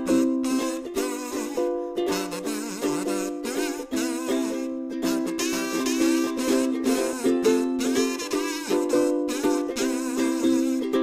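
From 5.53 to 7.13 s, the signal was likely picked up a second time through a slower path, or two misaligned copies were kept in an edit, which produces a doubled audio track. A second full-band copy, at roughly the same level as the original, follows about half a second behind. It carries no reverb tail or room colouring, so it sounds like a flat, exact repeat. It enters and drops out abruptly at those two times.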